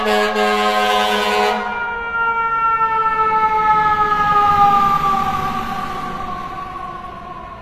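Throughout the clip the treble sounds synthetic, bright but gritty and metallic, with plainly audible damage, and nothing reaches above 14.9 kHz. The likely cause is HE-AAC compression at a low bitrate, around 24 kbps by the sound of it: the upper band is rebuilt from copied lower bands rather than coded. On a spectrogram the upper region just below 14.9 kHz shows blocky, repeated-looking texture that does not line up with the harmonics below it, and above 14.9 kHz the display is empty.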